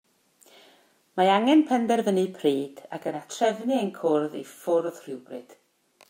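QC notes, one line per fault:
3.03–6.09 s: channel delay (comb filtering). One channel trails by about 20 ms before the mono sum. Evenly spaced notches from around 30 Hz make the speech sound rough or slightly doubled.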